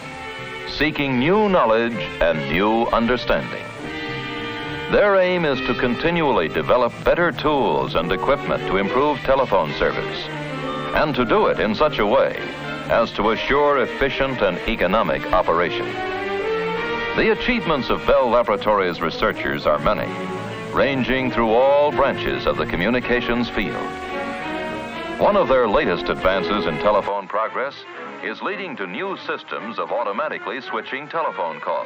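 At 27.08 s the sound abruptly loses its top end and stays that way until the clip ends at 31.86 s, with no gap at the change. Nothing above 7.6 kHz survives, the level drops by roughly 5 dB, and a new low background noise, around 40 dB under the signal, appears. This is likely an input switched to a poorer device. On a spectrogram the upper band cuts off sharply at that moment, and the waveform's envelope visibly shrinks.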